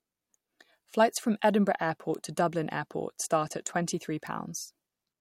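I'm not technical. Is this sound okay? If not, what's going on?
No. A bit error spike happened: single stored values got corrupted for an instant, causing brief sharp ticks in the speech at 0.95, 2.15 and 4.27 seconds.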